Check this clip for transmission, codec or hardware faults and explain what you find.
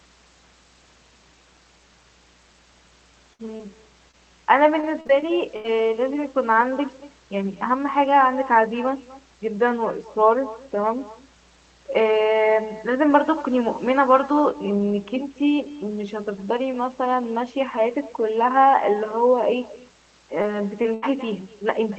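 Several faults run through this speech, carried over what sounds like an Opus call path whose band-limited top points to about 24 kbps.

Mains hum: a steady low 60 Hz tone sits under everything at about 25 dB below the speech, from power-line interference coupling in through a ground loop or transformer.

Echo with no canceller: each phrase is shadowed by a thinner copy about a fifth of a second later, at about 19 dB down, because the far loudspeaker's sound reaches its microphone and nothing removes it.

Burst of packet loss, 3.33–3.41 s and 20.94–21.04 s: the sound holds as a fading buzz or hiss, then jumps ahead. About 60 ms and 80 ms went missing and the receiver stretched the last audio across each gap.

Short concealed packet loss, 3.57–3.61, 4.11–4.15, 20.42–20.46 and 20.82–20.86 s: each is a brief smear or wobble where roughly 20 ms arrived too late. The decoder bridged the hole by continuing the preceding sound.

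Repeated packet loss (robotic sound), 4.81–5.66 s: the speech turns choppy, with pieces missing. Five gaps, the longest 80 ms, were each patched, with about a fifth of the stretch synthesised.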